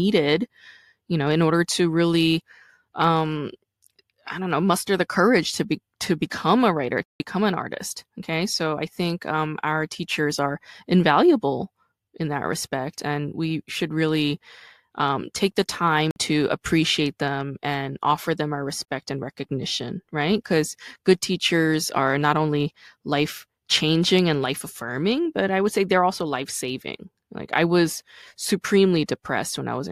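At 7.04 s, just after "to become a writer", the speech drops into a 160 ms block of digital silence before "an artist"; shorter blocks follow at 16.11 s (51 ms, after "really um take the") and 18.84 s (40 ms, after "and offer them our"). Samples were zeroed, so the sound cuts out and back with no fade. Unlike a faded dropout or concealed packet loss, nothing smooths or fills the gap.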